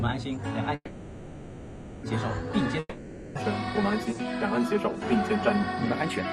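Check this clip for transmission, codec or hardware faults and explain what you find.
Two network faults show up here. From 0.75 to 2.06 s there's a call audio freeze: the last sound smears into a fading buzz for about 1.28 s, likely because packets stalled and the jitter buffer ran dry, then playback resumes exactly where it stopped, just later. From 2.79 to 3.38 s comes a long network dropout: another fading fill lasting 0.56 s, after which the audio picks up further along, with that stretch simply gone, likely lost packets that never arrived.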